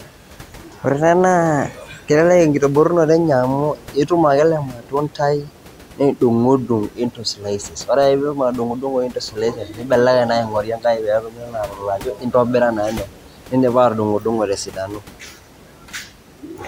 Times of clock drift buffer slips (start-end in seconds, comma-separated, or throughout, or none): none